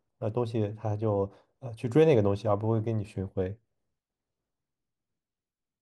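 No technical faults are audible.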